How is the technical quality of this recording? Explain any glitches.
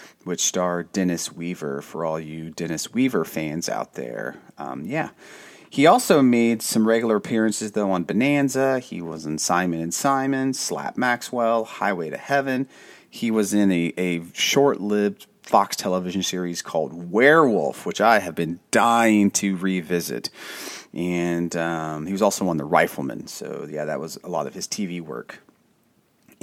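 Nothing stood out on listening to this speech recording.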